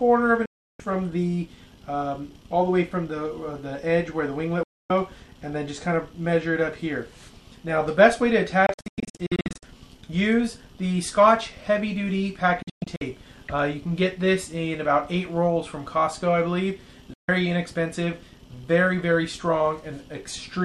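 Digital broadcast dropouts hit at 0.46–0.80 s, 4.63–4.90 s, 8.66–9.63 s, 12.62–13.02 s and 17.14–17.29 s. Corrupt frames made the receiver mute, snapping sound to silence within 3 ms. The third and fourth break into scattered holes, the longest 96 and 120 ms.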